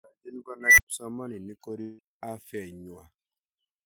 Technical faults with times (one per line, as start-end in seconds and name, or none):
0.61-0.87 unstable filter
1.81-2.01 long network dropout